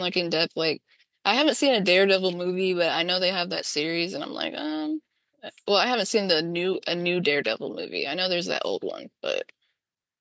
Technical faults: none

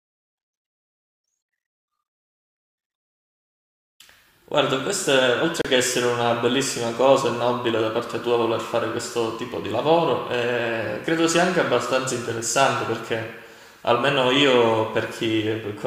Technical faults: digital broadcast dropout

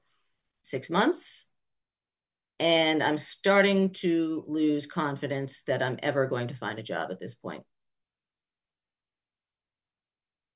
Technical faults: none

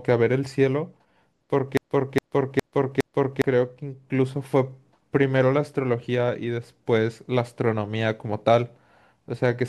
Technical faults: broken-record loop

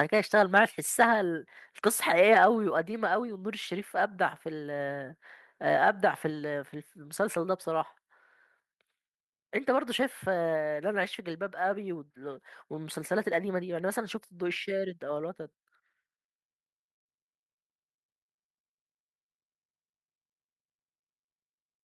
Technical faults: microphone overload; microphone volume stepped down

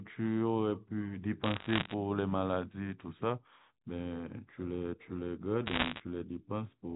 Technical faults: bit errors on a digital phone line

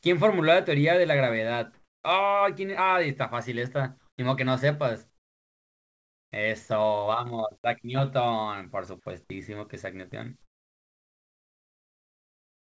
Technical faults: comfort noise in place of the background; short concealed packet loss

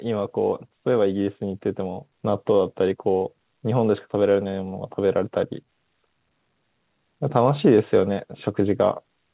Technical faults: automatic gain rising

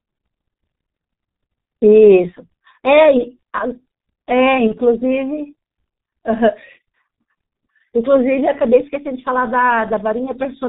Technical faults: G.723.1 codec; VoIP packet loss concealed by the speech codec

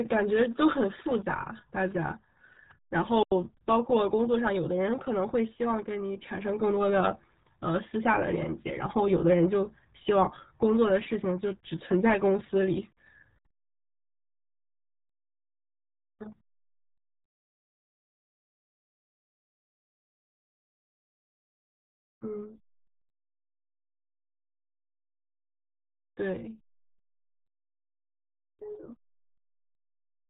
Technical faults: RealAudio 14.4 codec; digital wireless dropout

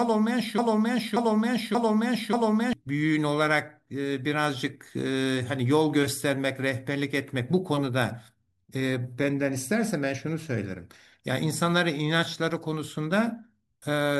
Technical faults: broken-record loop

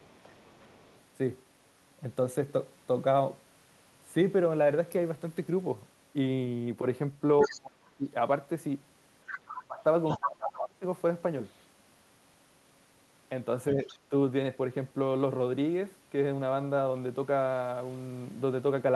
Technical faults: other side's voice leaking through; speech suppressed in double talk

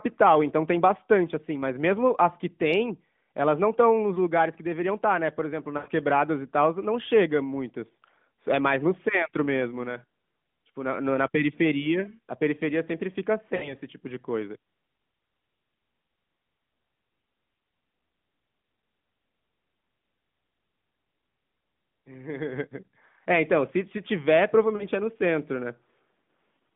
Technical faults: lost AMR speech frames

